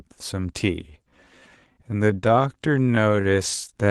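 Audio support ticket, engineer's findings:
Time-stretched section, 0.8 s to end: pace abruptly slows to 0.61x, pitch unchanged, drags. Likely stretch software repeating short segments to fill length.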